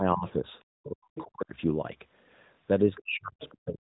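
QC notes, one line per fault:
0.0–0.36, 0.86–1.52, 2.88–3.42 and 3.58–3.9 s: speech suppressed in double talk. The talker dips by about 15 dB in the first stretch and as much as about 40 dB later. The likely cause is an echo canceller that could not separate near talk from loudspeaker echo and pulled both down.
0.83–0.89, 1.16–1.24, 2.95–3.0 and 3.41–3.56 s: other side's voice leaking through. Short scraps of a second voice sit about 15 to 25 dB under the talker, within the 3.8 kHz narrowband limit. Likely far-end loudspeaker playback reached the microphone and the echo canceller left a residue.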